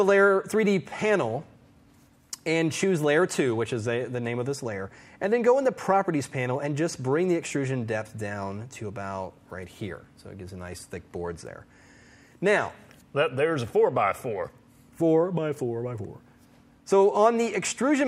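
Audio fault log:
No faults heard anywhere in the audio.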